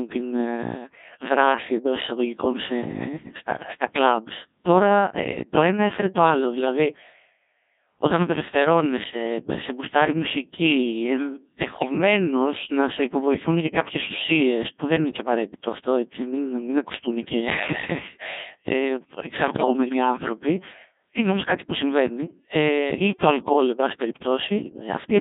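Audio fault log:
throughout, Codec 2 vocoder: speech is rebuilt from pitch, voicing, energy and envelope only, which fits roughly 1.6 kbit/s, so it sounds robotic and buzzy within 200 Hz to 3.7 kHz.
11.76–11.98 s, 19.48–19.73 s, 23.40–23.53 s (between "ε ή το" and "εν πάση"), bit errors on digital voice radio: flipped bits at a few percent corrupt frame parameters, so pitch, level and timbre jump into warbling gibberish.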